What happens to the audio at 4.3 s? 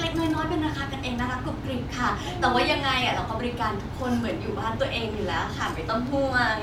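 Nothing goes wrong at 4.3 s; the speech runs through that point intact, with no dropout, click or distortion.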